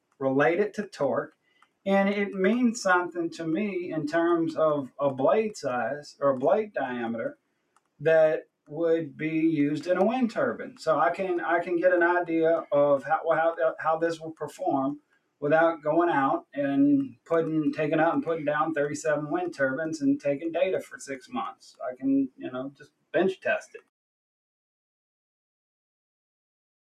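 Throughout the clip, a noise suppressor applied to music or sounds is treating sustained material as noise. Its gain rides up and down by around 5 dB, so attacks pass cleanly while held content and decays sag, giving a pumping, thinning quality.

Sound is cut by the noise suppressor at 0.01–0.2 s, 1.29–1.86 s, 7.32–8.01 s, 14.98–15.43 s, 17.12–17.3 s and 20.85–23.89 s. Each time, steady or fading sound drops by as much as about 21 dB and tails are clipped short. The last stretch is affected for roughly a second and a half.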